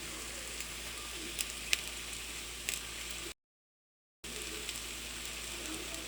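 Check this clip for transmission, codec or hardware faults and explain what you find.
One fault shows up, a playback stall from 3.32 to 4.24 s: the player likely ran dry of data or was blocked, so the sound cuts to silence for about 0.92 s before resuming.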